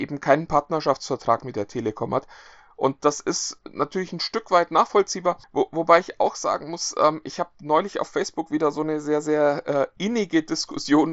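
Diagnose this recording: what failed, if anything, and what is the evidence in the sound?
No fault detected.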